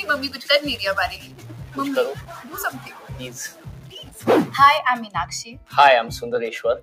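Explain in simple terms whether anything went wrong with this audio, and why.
A noise suppressor applied to music or sounds stays on throughout, treating sustained tones and tails as noise, so the sound pumps up and down.

From the start to 4.78 s there is distortion, with noise filling quiet moments; the likely cause is a stuck bit in the digital data.

Sound cut by the noise suppressor shows as brief dips at 1.17 to 1.47 s, 2.21 to 2.52 s, 2.76 to 3.1 s, 3.49 to 3.66 s and 3.84 to 4.22 s, where held sound sinks.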